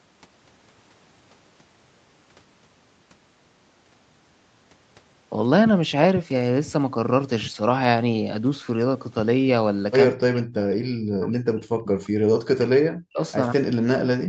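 A speech recording whose level drops sharply, by around 40 dB at the deepest, from 10.11 to 11.97 s, from 12.5 to 13.2 s, and from 13.52 s to the end, likely speech suppressed in double talk, where an echo canceller mistakes overlapping talk for echo and attenuates the talker.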